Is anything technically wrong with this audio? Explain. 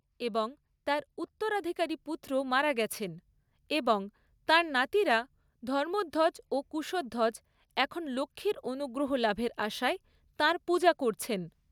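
Yes. From 0.19 to 3.29 s there is automatic gain rising. The gain control judged the speech input too quiet and lifted its level by about 6 dB over those three seconds. Voice and background noise swell upward together.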